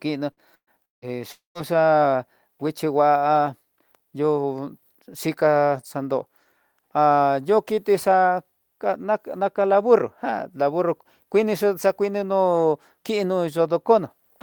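Right at the start, the speech gets chopped by a burst of packet loss at 0.31 to 0.40 s: about 60 ms of audio goes missing, and the receiver papers over it by stretching the last bit of sound into a short fading buzz or hiss before the talker jumps ahead. A longer burst hits at 0.55 to 0.70 s, with around 120 ms lost; the held sound dies away and there's roughly 70 ms of near-silence before things pick up again.

Then come two bigger holes, at 0.85 to 1.05 s and 1.32 to 1.58 s. In each, the last sound is smeared out and fades, then it drops to silence, about 160 ms in the first and 140 ms in the second, and the speech resumes with 180 ms and 240 ms respectively simply gone. Gaps that long with dead air behind the fill point to a likely long network dropout rather than just a few lost packets.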